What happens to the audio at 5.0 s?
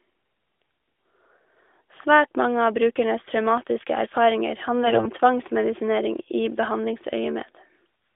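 AMR bit errors from 4.84 to 5.09 s: flipped low-priority bits misplace excitation pulses, making speech hoarse and gargly, with smeared, noisy harmonics on a spectrogram.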